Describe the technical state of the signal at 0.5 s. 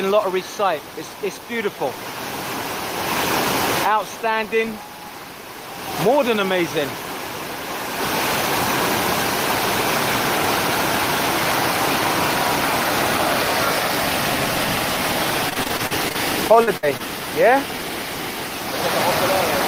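No fault is audible at 0.5 s; the signal is intact at that moment.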